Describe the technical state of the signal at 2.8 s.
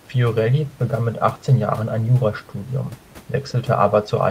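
At 2.8 s the speech signal is intact, with only the room's own background noise sitting about 29 dB below the voice.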